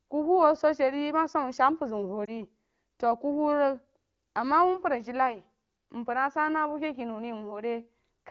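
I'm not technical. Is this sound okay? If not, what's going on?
No, there's a brief fault: a lost AMR speech frame at about 2.25 to 2.32 s. The phone decoder briefly patched over missing data, causing a short dip or warble consistent with one dropped frame.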